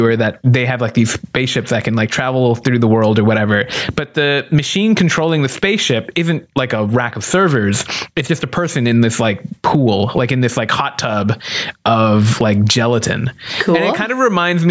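Throughout the speech there is gain pumping, likely from input gain set far too high, with a fast limiter clamping it back on every loud syllable. The gain swings roughly 15 dB, leaving the sound squashed.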